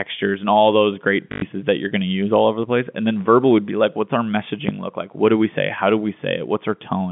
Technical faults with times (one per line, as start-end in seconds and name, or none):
1.32-1.42 packet loss with last packet repeated
4.69-4.92 phantom power thump